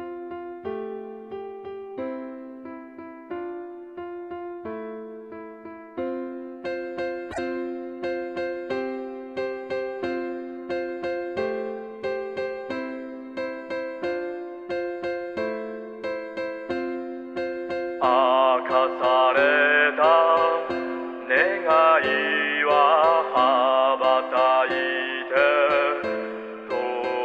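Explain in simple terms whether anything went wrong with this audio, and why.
Something did go wrong, briefly, at about 7.30 to 7.39 s. That's a repeated frames fault: one tiny chunk of the compressed audio, about 26.1 ms long, got played two extra times in a row. You hear it as a quick stutter. Each repeat pushes everything after it later, so the audio ends up about 52.2 ms longer than it should be.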